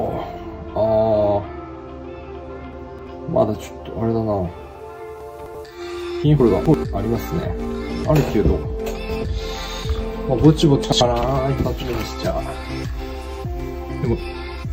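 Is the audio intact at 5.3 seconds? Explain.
No. The sound at 5.3 seconds falls inside a stretch of chunks out of order running from 5.21 to 5.55 s. One 85 ms block of audio was delivered late and plays three blocks after its proper position, so the segments that should follow it come first. Nothing is missing, but the sequence is scrambled, and the three abrupt splices between misplaced blocks produce a brief jumbled, garbled moment.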